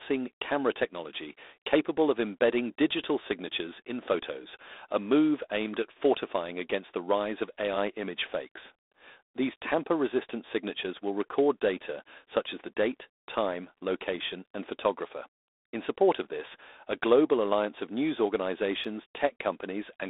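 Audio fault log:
throughout, G.726 ADPCM: 24 kbit/s coding leaves a harsh, rasping hiss that tracks the speech level; the spectrogram shows a 300 Hz to 3.7 kHz band and nothing above 3.8 kHz.
18.84 s, block of digital silence: a 5.8 ms run of zeros, which fits an unfilled 256-sample buffer, clicks as a tick; the waveform shows a flat line with abrupt edges.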